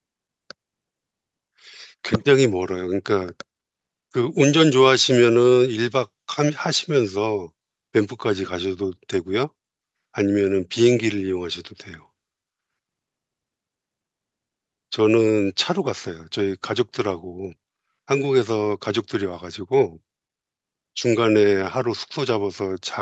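No technical faults can be heard anywhere in the speech. The call path is audible as a top end that stops at about 8 kHz, with the lowest bass trimmed away by the microphone processing.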